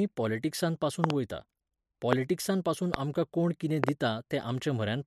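Speech with loud pops sitting on top at 1.04–1.12 s (a double), 2.13–2.15 s, 2.94–2.96 s just before "आमकां कोण कितें", and 3.84–3.91 s (another double) after "आमकां कोण कितें", peaking roughly 20–25 dB above the voice, likely voltage spikes from a connector, switch or driver glitch.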